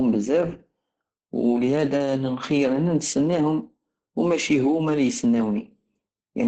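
From start to finish the speech sounds muffled, hoarse and faintly robotic, with nothing above 9 kHz. This is Opus voice compression at a very low rate, which fits about 10 kbps: the SILK speech coder narrows the band and coarsely approximates the voice's excitation.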